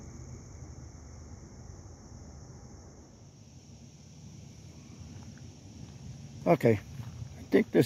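Nothing stood out as a technical fault on listening to this recording.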